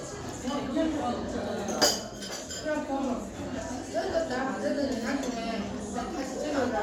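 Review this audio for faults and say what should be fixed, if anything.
Nothing needs fixing, because no technical faults can be heard anywhere in this everyday-sound recording.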